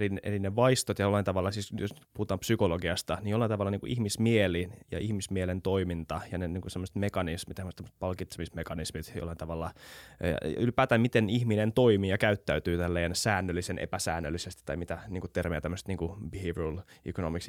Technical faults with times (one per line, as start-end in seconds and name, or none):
none